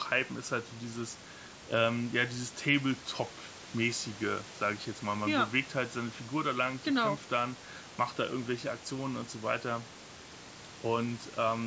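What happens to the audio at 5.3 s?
At 5.3 s the speech continues intact, with nothing more than the faint room noise about 20 dB beneath it.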